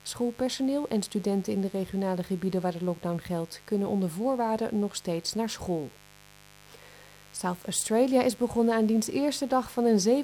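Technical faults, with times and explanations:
Throughout, mains buzz: a steady, raspy buzz sits roughly 25 dB under the sound, from switching spikes on the 50 Hz supply spreading harmonics into the kilohertz range.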